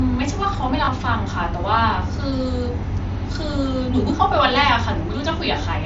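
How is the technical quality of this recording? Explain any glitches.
One glitch is audible in this speech, which is carried over a Bluetooth headset link using the mSBC wideband codec. At 0.85 to 0.88 s, a brief buzzy held tone gives way to a slight warble. This is concealed Bluetooth headset packet loss: roughly 20 ms of missing audio was patched by repeating recent waveform.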